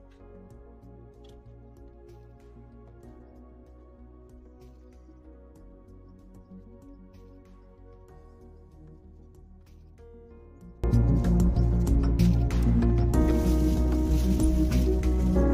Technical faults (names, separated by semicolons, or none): one channel inverted